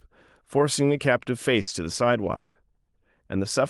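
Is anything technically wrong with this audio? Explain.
Yes, there are two gaps. From 1.61 to 1.69 s the sound freezes into a short held buzz or hiss that fades, then jumps ahead. This is a burst of packet loss: about 60 ms of audio never arrived, and the receiver stretched the last sound over the hole.

From 2.35 to 2.57 s a longer smeared, fading stretch of about 200 ms replaces the audio, with no true silence before it resumes further on and with that portion gone. The likely cause is a long network dropout, with concealment filling the whole gap.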